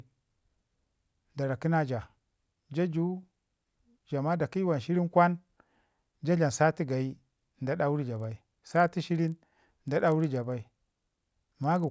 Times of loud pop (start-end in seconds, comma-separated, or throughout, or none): none